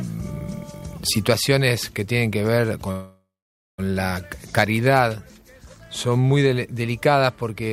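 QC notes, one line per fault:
2.91–3.80 s call audio freeze: last sound stretched into a fading tail, then 0.51 s silence; resumes 0.87 s late with nothing lost, likely a drained jitter buffer.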